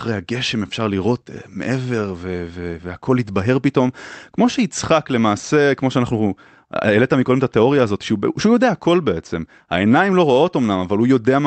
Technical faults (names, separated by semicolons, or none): clock drift between sender and receiver; repeated timing corrections